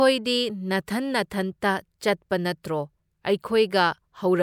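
Nothing in the speech stood out as a technical problem on listening.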